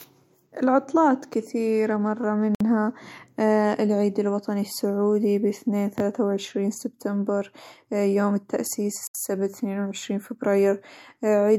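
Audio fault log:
2.55–2.60 s and 9.07–9.15 s, Bluetooth stall: the speech drops abruptly to silence for about 56 ms and then about 75 ms, then resumes without a fade. The likely cause is a wireless link stall, where delayed packets let the headphones' buffer run empty until retransmissions arrived. On a waveform each gap is a flat-line segment with hard edges. On a spectrogram it is a clean vertical blank band across all frequencies.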